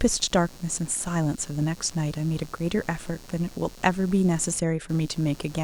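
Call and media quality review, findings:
Computer activity noise, throughout speech. Buzzing, chirping pulse train, repeat rate roughly 150 Hz, level roughly 25 dB under the speech. Probable component: shared ground between computer and audio input; processor, graphics or mouse load changes modulate ground current. Distinguisher: noise level tracks machine activity, not speech dynamics, and pulses shift with load. Mains hum would instead stay steady at a fixed mains-related pitch.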